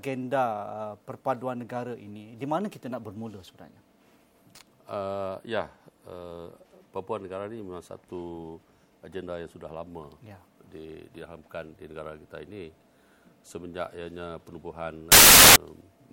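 From 15.12 to 15.56 s, samples built from the wrong bytes: each value is assembled from misordered bytes, so rapidly varying low bits dominate. It sounds like a burst of loud, harsh broadband noise, appearing as a dense waveform block and broadband spectrogram smear.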